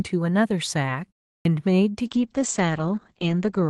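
Clipped start after a pause at 1.38 s to 1.45 s: after a silence of about 0.34 s, the playback device had gone idle and needed time to wake and lock before passing audio again. The first 73 ms of the returning speech never reached the output, so the syllable appears out of nothing, with its first sounds shaved off and an abrupt, hard onset where a natural attack should be.

Call bitrate drop from 2.06 s to the end: the call's bandwidth estimate collapsed, and the Opus encoder was pushed from 32 kbps down to 10 kbps, holding at that floor for about 1.28 s. With so few bits, each frame is quantised coarsely and the coded bandwidth shrinks from 12 kHz to 8 kHz. The speech loses its airy top and turns dull, grainy and watery, a clear step down from the brighter sound before 2.06 s.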